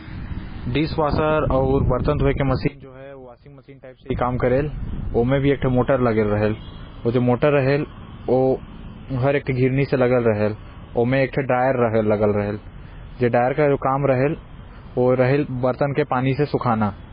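MP3 compression runs through the whole speech clip and is the likely cause of its dull, watery sound. Nothing is present above 5 kHz, and the damage is heavy: weak frequency components flicker in and out, smearing consonants. This points to a very low bitrate, around 16 kbps.

One channel inverted, from 2.68 to 4.10 s, likely explains the sudden drop of about 22 dB. With one side's polarity reversed, the shared centre content cancels in a mono sum, leaving only a faint residue until the level returns.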